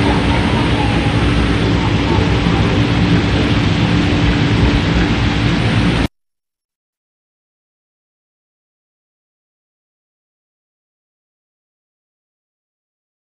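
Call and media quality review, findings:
Bluetooth SBC bit pool drop, 1.63 to 5.60 s. Probable component: A2DP link under congestion, encoder throttled, which fits a bit pool cut from about 31 to 11 and roughly 83 kbps. Top sub-bands starved, remainder coarsely quantised. Symptom: dulled treble, gritty noise floor rising, clearing once rate recovers.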